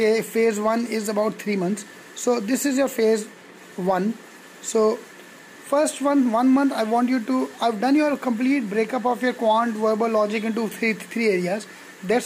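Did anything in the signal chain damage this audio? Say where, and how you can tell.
No, nothing in the chain audibly damaged this audio, so there is no stage to point to.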